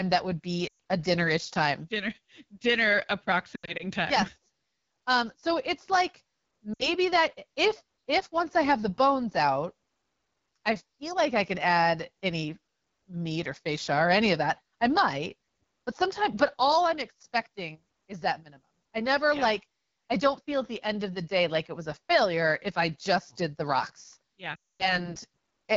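Throughout, the speech runs through the AMR wideband (HD Voice) codec at 8.85 kbit/s, one of its two lowest rates. The vocal tract model is starved of bits, so voices sound plainly rough and raspy, with noisy, synthetic-sounding upper frequencies.

Lost AMR speech frames then force the decoder to keep replaying its last good pitch and vocal tract settings at falling gain. Just after "that would", from 0.67 to 0.73 s, about 120 ms of audio goes missing, which fits six 20 ms frames, and the sound sags to near silence. From 3.55 to 3.87 s, similar losses are scattered over roughly a quarter second, with the longest run 80 ms, giving stuttering drops toward near silence. After "so it's like", 6.73 to 6.87 s brings a shorter 60 ms dip. From 24.55 to 25.09 s, about 240 ms is lost, so the sound drops to near silence within two frames and returns weak or rough.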